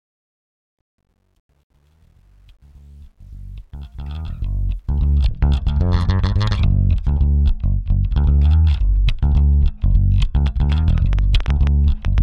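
The audio opens with a fade-in, and from 0.0 to 5.17 s it carries truncation distortion on a fade. It is worst from 0.0 to 3.27 s, where the quiet start sounds gritty. The coarseness fits a gain stage keeping only about 10 bits without dither, so low levels collapse into a few square steps. Unlike broadband hiss or a codec's swirling artefacts, the grit follows the fade level and eases as the sound gets louder. From 10.47 to 12.19 s a train of clicks runs over the sound, about ten similar ticks at roughly 5.8 per second. They are unevenly spaced and peak about 5 dB above the signal. They are likely caused by interference from nearby equipment or a faulty connection. Their repeated shape and sustained run set them apart from random crackle or a single edit click.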